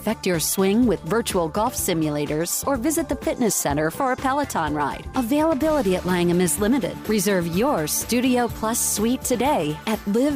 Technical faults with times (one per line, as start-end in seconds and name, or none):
none